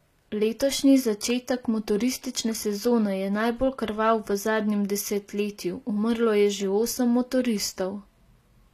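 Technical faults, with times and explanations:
Throughout, HE-AAC compression: The speech has a plainly audible coding sound, and nothing is present above 14.9 kHz. The likely cause is HE-AAC at a low rate, which fits a bitrate near 24 kbps. The codec keeps only the lower spectrum and fills in the treble by copying lower bands upward under a coarse envelope. That rebuilt top end is not the original. Its harmonics miss the real ones, so s sounds come out gritty and lispy.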